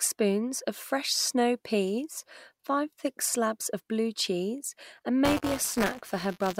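Right after "of blue cheese and", at about 5.25 s, the speech picks up a robotic buzz that carries on to the end of the clip. That's buffer tearing: the writer and reader of the ring buffer have drifted so they cross each period. A small slice of every buffer, around a twentieth, holds audio from roughly 20 ms earlier, with hard joins either side. The splices repeat at 200 Hz, which points to a 5 ms buffer, so you hear a steady rattle riding on the voice.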